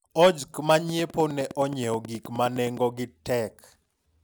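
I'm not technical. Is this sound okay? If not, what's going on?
No. A train of clicks runs from 0.89 to 2.78 s: around twenty evenly spaced ticks, about 9.6 per second, sitting on top of the speech. Such a steady ticking likely comes from electrical interference from nearby equipment or a faulty connection or power supply.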